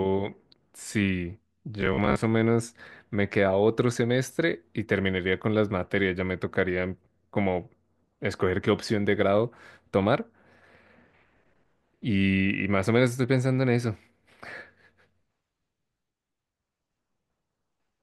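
Speech, with robotic sound from repeated short buffers between 1.81 and 2.23 s: a rigid metallic buzz near 66.7 Hz, likely from a 15 ms buffer looping.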